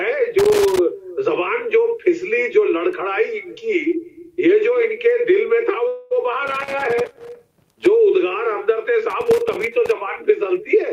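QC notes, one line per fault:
0.39–0.79 s, 6.47–7.86 s and 9.10–9.91 s: loose connector crackle. Three irregular bursts of crackle and scratching break into the sound. The longest runs about 1.4 s. A worn or dirty contact is making and breaking as it shifts. Each break chops the signal into fragments, and any DC on the line turns the sudden changes into pops. That uneven chopping is why it scratches rather than hums.
5.87–6.13 s: call audio freeze. For about 0.23 s the sound stops moving forward and the last moment is held as a short fading buzz or hiss. It never drops to silence. Then the audio resumes exactly where it left off, with nothing skipped. Everything after is simply pushed about 0.23 s later. The likely cause is packets delayed in transit, emptying the jitter buffer so the receiver stretched the final sound until data arrived.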